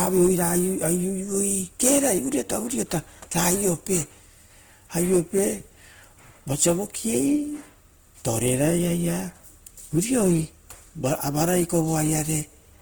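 Hard clipping runs throughout the speech: peaks driven about 8 dB past the limit are sliced flat on about 0.7 percent of samples, adding crackly harmonics to loud syllables.

Opus compression, also throughout, is the likely cause of the grainy, rough texture. The CELT music mode is noise-filling starved bands, which fits a low bitrate near 16 kbps, though bandwidth still reaches 20.1 kHz.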